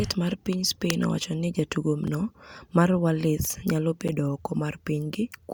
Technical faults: gap between stream segments

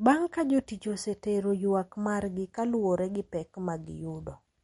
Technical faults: MP3 compression

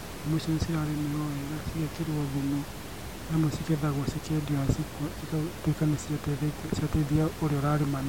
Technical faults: none

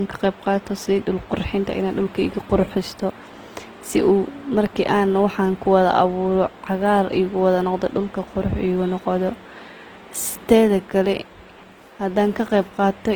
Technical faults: Opus compression

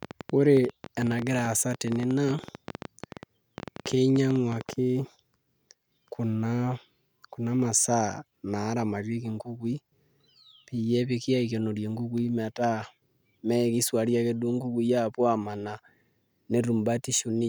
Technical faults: train of clicks

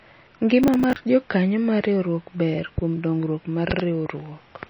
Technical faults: MP3 compression; processor overload crackle; loud pop

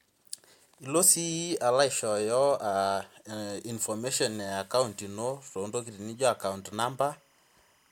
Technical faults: timecode bleed

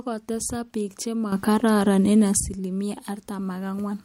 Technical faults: sudden gain jump

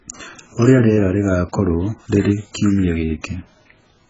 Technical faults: AAC compression

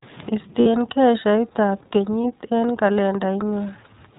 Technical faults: iLBC codec; lost iLBC frames

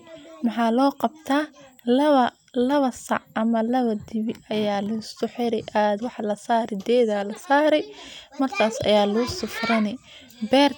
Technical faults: none

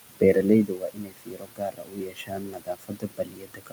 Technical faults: noise suppressor artifacts; speech cut by the noise suppressor

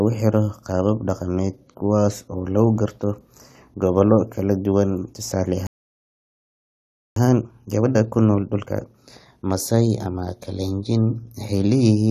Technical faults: playback stall; time-compressed catch-up

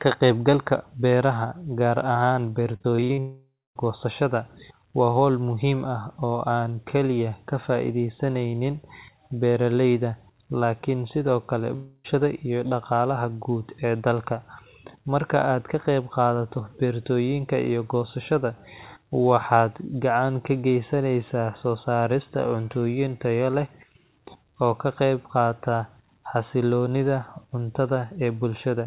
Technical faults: repeated packet loss (robotic sound); long network dropout

